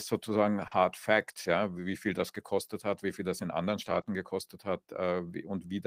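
At 0.67 to 0.73 s, about 40 ms of speech never reached the decoder in time. This short concealed packet loss was bridged by extending the preceding sound, leaving a brief smear. Its last 20 ms, 0.71 to 0.73 s, came from a lost packet rebuilt from error correction: a low-bitrate copy carried in the next packet, so that tail sounds rougher and noisier. From 3.85 to 3.99 s the same error-correction rebuild covers about 80 ms, which fits four lost packets, giving a grainy stretch with no gap. At 4.01 to 4.05 s a further 20 ms went missing and was concealed, producing a short wobble.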